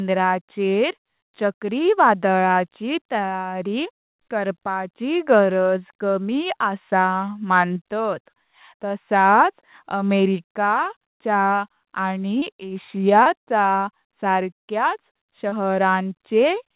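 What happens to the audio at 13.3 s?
A short concealed packet loss runs from 13.23 to 13.28 s. About 20 ms of audio never arrived, so the receiver extended the preceding sound and blended back into the real signal. That leaves a brief smear or wobble rather than a clean silent gap or click.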